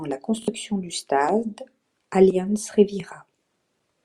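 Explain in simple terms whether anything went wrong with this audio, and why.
Near the start of the speech, from 0.43 to 0.48 s, there is a brief Bluetooth stutter. Data arrived late or was lost, so the receiver repeated its last short slice, causing a quick buzzing stutter. About 43 ms went missing, which fits roughly two lost packets.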